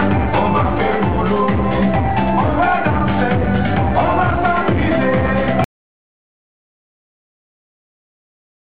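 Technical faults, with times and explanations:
5.64 s to the end: audio dropout to silence. The input was likely lost while zeros kept being written, so the sound cuts off abruptly into complete silence without any room tone.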